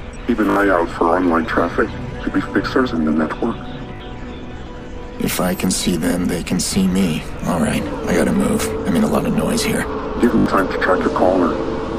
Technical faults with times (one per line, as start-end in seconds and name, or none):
0.50-0.56 repeated buffer
3.96-4.00 repeated buffer
10.38-10.46 repeated buffer